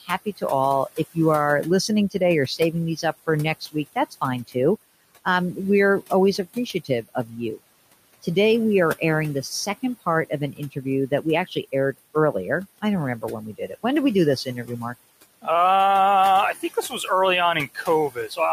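Noise suppressor artifacts run through the whole clip. The suppressor pulls the room's steady background down by about 17 dB between phrases, then lets it rise back under the speech, so the leftover noise pumps.

The suppressor also cuts speech it mistakes for noise, from 0.01 s to 15.47 s and again from 16.55 s to 18.53 s. Soft consonants and quiet word endings get ducked by as much as about 20 dB in the first stretch, adding up to around a second and a half, and by up to about 14 dB near the end, so they come across swallowed and faint. The room noise itself sits about 18 dB below the speech.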